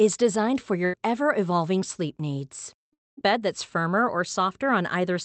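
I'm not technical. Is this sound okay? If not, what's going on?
No. There are two gaps where the sound briefly breaks up.

The first is a burst of packet loss at about 0.85 to 0.95 s, just after "designed for". A few pieces of the audio never arrived. The receiving end filled the hole with a short fading sound, and a tiny bit is simply missing before "ever evolving sleep needs".

The second, from about 2.93 to 3.19 s, is longer. After "ever evolving sleep needs", the sound stretches into a sound that fades into quiet. Then it jumps ahead to "bed that's firmer or", skipping about a quarter of a second. This is likely a long network dropout, when nothing got through for a moment.

The clip also sounds muffled because it came through a call connection.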